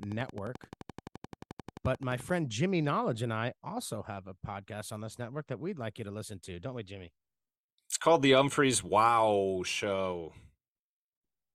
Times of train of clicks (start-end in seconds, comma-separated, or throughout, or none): 0.03-2.30